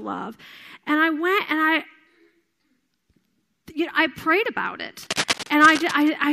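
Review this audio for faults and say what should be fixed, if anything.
From 5.03 to 6.09 s, after "know I prayed about", uneven scratching sits roughly 10 dB under the speech: cable scratch noise, likely a worn connector whose contact changes as it moves. Replace worn cables and secure connectors so nothing shifts during recording.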